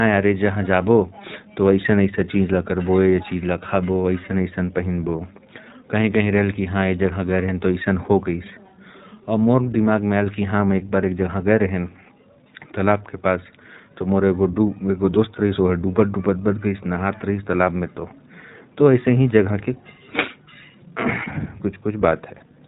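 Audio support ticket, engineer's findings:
iLBC codec, throughout the speech. Band-limited, nothing above 4 kHz; plainly audible roughness, synthetic edge. Excitation coded per frame with no carry-over between frames; sound fits the 20 ms, 15.2 kbps mode. Component: narrowband VoIP encode stage.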